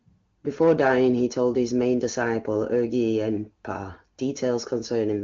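Throughout this speech recording a hiss and graininess ride on the signal. The roughness swells on louder passages and on bright, sibilant sounds, and it drops away entirely in the pauses. That behaviour identifies sample clock jitter. The converter's timing wanders by a few microseconds, so each sample is captured slightly off its proper instant. The resulting error scales with how fast the waveform is changing, and here it sits roughly 30 dB below the speech. The band stops near 7.5 kHz, which points to an AMR wideband (HD Voice) codec at a high rate, and the codec itself adds little audible damage.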